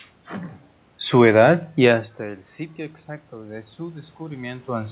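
A speech clip, carried over a call path with nothing above 4 kHz. From 3.29 s to the end, automatic gain rising is heard. The input level dropped by about 16 dB, so the gain control slowly raised its gain. Voice and room noise swell upward together.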